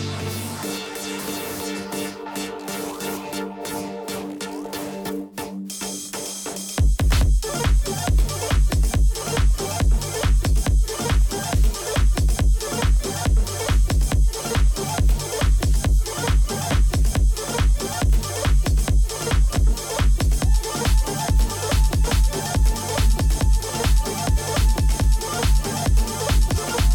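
Compressed frames skipped at 16.70, 19.53, 22.04, 24.36 and 26.54 s: whole frames, which fit a 46.4 ms frame length, are dropped, so the sound jumps ahead by roughly 150 to 500 ms each time.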